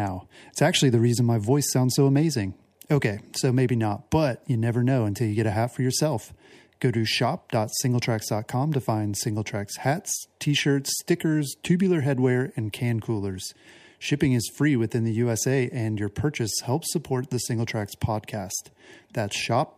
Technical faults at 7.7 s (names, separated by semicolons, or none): none